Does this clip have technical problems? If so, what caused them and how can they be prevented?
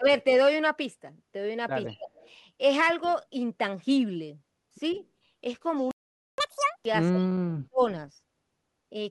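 Yes. The speech is suppressed in double talk three times. There are brief dips at 0.00–0.06 s, roughly 15 dB deep, and at 1.85–2.11 s, around 25 dB deep. At 7.10–7.82 s the voice drops by about 40 dB for roughly half a second. The likely cause is an echo canceller that cannot tell the near talker from loudspeaker echo while both sides speak, so it turns both down. Tuning the canceller's double-talk detection, or using full-duplex hardware, would prevent this.

An echo leak returns a faint, delayed copy of the voice 153 ms behind the original. It appears at 1.86–1.99 s, 2.16–2.30 s, 3.03–3.13 s and 4.91–4.99 s. Its level is about 20 dB below the speech in the first scrap and about 30 to 35 dB below in the others. Each copy is short. The likely cause is a far-end loudspeaker whose echo canceller did not fully remove what its microphone picked up. Headsets at that end, or a better-converged canceller, would stop it.

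A playback stall silences the audio from 5.91 to 6.38 s, a gap of 471 ms in mid-flow. The player likely ran out of buffered data or had its audio thread blocked, and output stopped until it recovered. A larger jitter buffer and a high-priority audio thread would prevent this. Both help the player ride out network or scheduling delays.

Catch-up at higher speed follows the stall, from 6.38 to 6.85 s. The player resamples its backlog at 2.0 times normal speed, so the voice rises roughly 10 semitones and sounds rushed. It then returns to normal. This wins back the lost time but is clearly audible. Time-stretching that preserves pitch, or a gentler speed-up spread over longer, would hide it.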